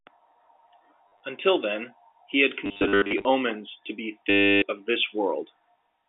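Short robotic stutters come at 1.08 to 1.2 s, scattered through 2.65 to 3.25 s, and unbroken from 4.3 to 4.62 s, where a steady buzz near 100 Hz takes over. This is packet loss with the last packet repeated. The receiver fills each gap by replaying the last good packet, and a replay seldom joins in step with the pitch. A 100 Hz buzz fits 10 ms packets. The band-limited telephone sound, roughly 250 Hz to 3.6 kHz, comes from G.711 coding.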